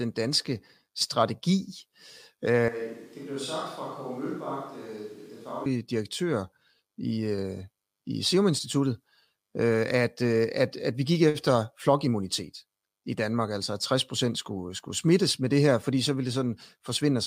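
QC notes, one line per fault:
2.69 to 5.66 s, switch to a distant microphone: speech abruptly turns roomy and hollow with less bass, drops about 10 dB, and carries room noise roughly 25 dB below it, likely because the close microphone's signal was lost and a farther one took over.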